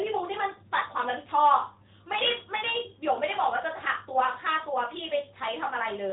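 From the first moment to the last, the speech carries the sound of the AMR narrowband mobile codec. Nothing gets through above about 3.8 kHz, so consonants lose their edge and the whole thing feels boxed in. The codec rebuilds the voice from a vocal-tract model excited by sparse pulses, and here the damage is plainly audible, a buzzy, synthetic texture that fits a higher-rate AMR-NB mode of around 10 kbps.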